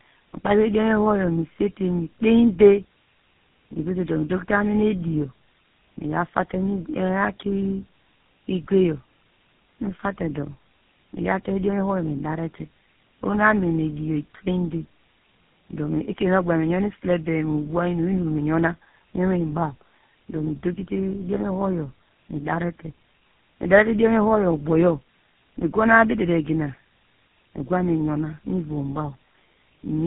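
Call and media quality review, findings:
Tandem speech coding throughout: the call was decoded and re-encoded at successive network borders, with the sound pointing to three speech codecs in a row, GSM-type last. Each pass degrades the prior output, leaving speech rough, muffled and warbly, with nothing above 3.8 kHz.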